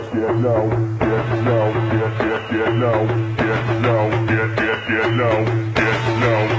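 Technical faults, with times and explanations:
No technical faults; the call path is working as it should, and the absence of content above 8 kHz points to a wideband codec such as G.722.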